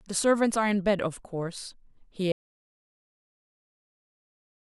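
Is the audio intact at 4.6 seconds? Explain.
No. At 4.6 seconds the clip sits inside an audio dropout to silence that begins at 2.32 s and runs to the end. The input was likely lost, with silence still being written, so the speech cuts off abruptly into total silence without any room tone.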